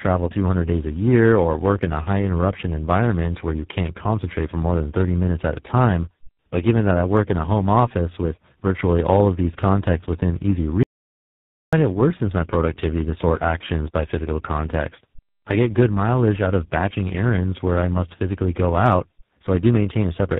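From the start, the speech has the rough, muffled, warbly quality of tandem speech coding, with nothing above 3.8 kHz. It sounds like three low-rate speech codecs in a row, something like G.726, iLBC and then GSM full rate, each re-coding the previous one's damage.

At 10.83 s, right after "these contexts within easy", the audio drops out to dead silence with no room tone until 11.73 s, when it resumes on "it worsens my productivity". That's about 0.9 s gone, likely a lost input or link.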